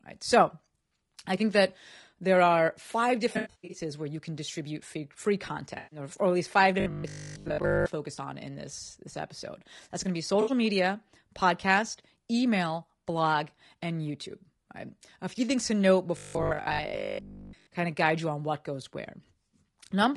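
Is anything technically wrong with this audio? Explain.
Yes. Throughout, the speech sounds rough and grainy, with a thin, synthetic top end, likely from low-delay AAC compression (AAC-ELD) at 32 kbps, whose short frames resolve pitch harmonics poorly.

AAC frame loss with concealment causes smeared, noisy, phasey patches at 3.33 to 3.81 s, between "that there are five" and "where you can distribute", at 5.77 to 5.99 s after "can distribute free free", and at 10.41 to 10.51 s. The decoder fills the gaps from the last good spectrum. In the first patch, 300 ms was lost in bursts over 400 ms, the longest run about a tenth of a second.

Robotic sound from repeated short buffers gives a rigid, metallic 50 Hz buzz at 6.80 to 7.86 s, between "or at least five" and "to focus on in", and again at 16.17 to 17.69 s. The likely cause is that new audio arrived too seldom, so the last 20 ms kept repeating while most of the real audio was skipped.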